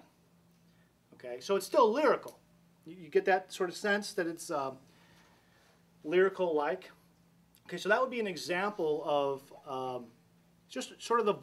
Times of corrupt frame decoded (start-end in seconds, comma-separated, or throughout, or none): none